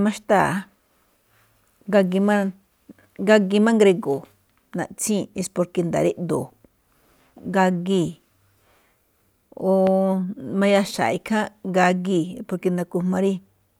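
At 9.87 to 9.89 s a single loud pop cuts through the speech, peaking around 10 dB above it. It is likely a voltage pulse from a switch, plug or static. On a waveform it is a sharp spike; on a spectrogram, a thin full-band vertical stripe.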